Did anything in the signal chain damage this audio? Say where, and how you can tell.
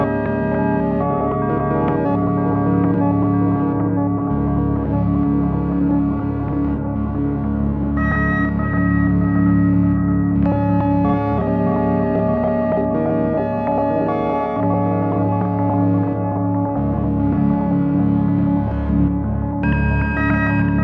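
No, nothing in the signal chain stood out as damaging this audio on listening.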